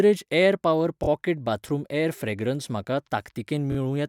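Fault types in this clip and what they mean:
Repeated frames: a brief stutter where one 24 ms slice of the speech plays three times running, at 1.02 s between "एयर पॉवर" and "पॉकेट बाथरूम" and again at 3.71 s. This points to a single compressed frame being sent again, adding 48 ms each time.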